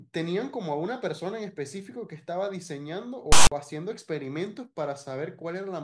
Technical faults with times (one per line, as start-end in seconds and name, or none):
3.32-3.52 file tags played as audio